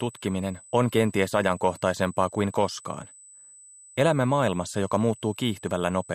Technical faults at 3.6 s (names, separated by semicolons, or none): USB whine